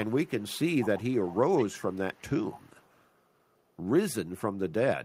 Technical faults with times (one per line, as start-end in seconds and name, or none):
0.06-3.11 echo leak